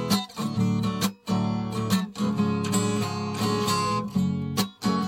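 No technical faults are audible.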